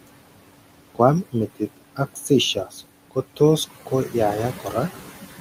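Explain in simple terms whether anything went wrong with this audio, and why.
The noise suppressor, the part meant to strip out background hiss, is working hard throughout and leaves noise suppressor artifacts. It pushes the room noise far down.

The same suppressor also causes speech cut by the noise suppressor: it mistakes quiet bits of the talking for noise and turns them down with the background. This happens between 1.96 and 2.3 seconds, 2.54 and 2.75, and 3.7 and 4.14, each time swallowing about a tenth of a second of sound.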